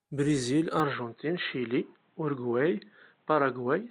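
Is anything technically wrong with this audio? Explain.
Yes. From 0.80 s on, the speech loses everything above 4.1 kHz, likely because the input switched to a poorer device. Unlike plain filtering, faint new background noise arrives with it, with no gap.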